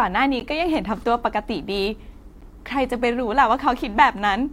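Speech, interrupted at 0.40 s by a gap between stream segments: a hard-edged silent hole of about 13 ms where two segment timestamps fail to meet, so the player inserts silence at the join, consistent with 2-second segmenting. No audio is lost; playback simply resumes slightly later.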